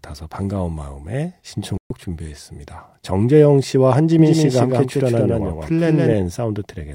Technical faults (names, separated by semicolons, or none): digital broadcast dropout; doubled audio track